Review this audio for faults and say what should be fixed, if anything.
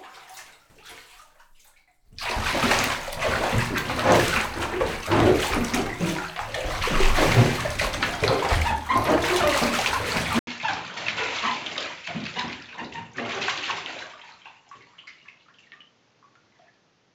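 At 10.39 s there is an 80 ms gap. From then to the end, the sound turns dull, with nothing above 7.6 kHz. It drops roughly 10 dB and gains new background noise. This is likely an input switched to a poorer device. Lock the recording input to one microphone before starting.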